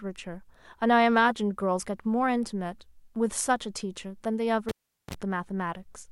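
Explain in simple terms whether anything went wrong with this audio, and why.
At 4.69 seconds a cable is pulled and plugged in while the sound is live. There is a pop, then about 0.4 seconds of near silence. A short 60 Hz buzz follows as the plug goes back, then another pop at 5.14 seconds.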